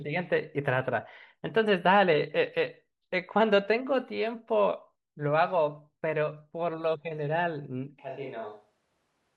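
At 8.00 s the speech suddenly turns roomy and hollow, with less bass. This is a switch to a distant microphone, likely because the close microphone dropped out. The level falls about 5 dB. Room noise rises to about 35 dB below the speech. It lasts to the end.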